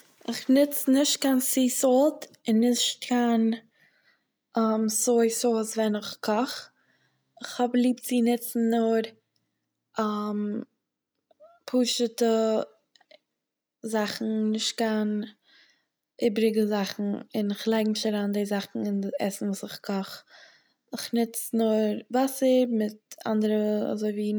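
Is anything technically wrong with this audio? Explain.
No, nothing technically wrong turns up anywhere in this speech recording, so there's nothing here to flag.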